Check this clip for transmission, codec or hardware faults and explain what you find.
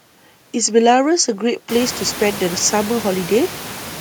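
Nothing here points to a transmission, codec or hardware problem; the one change you'll notice is the room noise jumping by about 24 dB around a second and a half in and then sitting about 16 dB under the speech, which is just the sound of the space the microphone was in.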